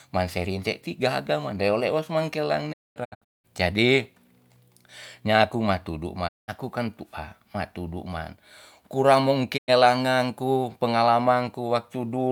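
A digital broadcast dropout occurs three times as the receiver loses valid frames and mutes. From 2.72 to 3.46 s the speech breaks into several 20 ms fade-outs and holes, the longest 224 ms. Single gaps follow at 6.27–6.50 s and 9.56–9.70 s. The missing audio never returns.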